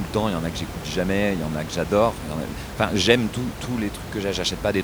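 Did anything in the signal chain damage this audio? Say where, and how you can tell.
No, nothing in the signal chain damaged this audio; the only thing audible besides the speech is room noise in the recording itself, sitting about 10 dB below the voice.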